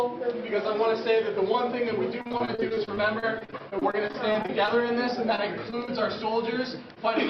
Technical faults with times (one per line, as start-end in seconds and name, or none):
2.21-4.69 repeated packet loss (robotic sound)
5.36-5.89 repeated packet loss (robotic sound)
6.94-6.98 short concealed packet loss